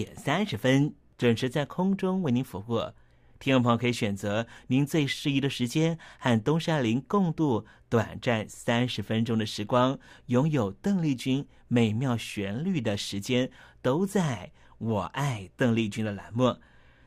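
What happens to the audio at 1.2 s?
From 1.20 to 1.23 s a corrupt frame is decoded. A couple of compressed frames carry flipped bits, and the decoder plays them with wrong gains or misread codes. The result is a brief burst of misplaced energy peaking near -25 dBFS. Unlike a dropped frame, there is no smeared repeat.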